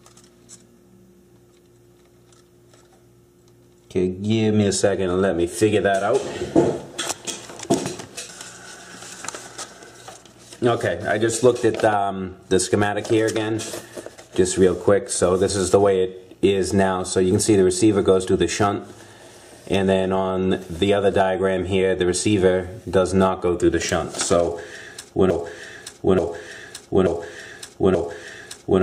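At 25.31 s the audio locks into a broken-record loop. A 0.88 s fragment repeats exactly, back to back, four times, through to the end. Playback likely stalled and kept resending its last fragment. Whatever should have played there is lost.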